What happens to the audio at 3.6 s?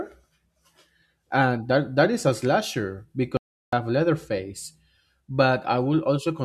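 At 3.6 s the speech is cut off into dead silence, with no room tone at all, from 3.37 to 3.73 s, right after "that is a slasher". This audio dropout to silence lasts about 0.36 s and likely comes from the input briefly failing while silence was still being written.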